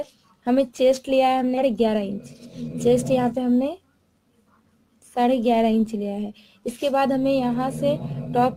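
At 1.57 to 1.59 s there is a skip ahead. About 0.7 s of audio never plays. The stream was dropped while later audio already waited, so playback jumps forward with no gap. The two sides join almost directly, and the sound lurches abruptly.

From 1.66 to 3.40 s comes a jitter buffer speed-up. The buffer held more audio than its target. To shrink the delay, the receiver cut many tiny pitch-period slices, about 0.15 s in total. The sound runs at 107% speed, same pitch, noticeably hurried.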